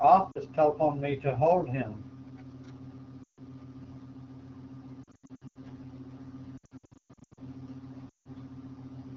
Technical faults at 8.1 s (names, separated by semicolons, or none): AMR wideband (HD Voice) codec; lost AMR speech frames